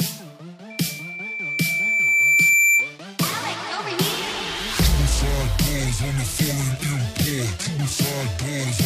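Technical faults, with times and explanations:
0.70 to 2.97 s, loudspeaker feedback squeal: a steady 2.3 kHz tone swells over roughly two seconds to around 10 dB above the rest of the sound, as the mic-to-speaker loop's gain exceeds one there. A spectrogram shows one brightening horizontal line; the waveform envelope grows.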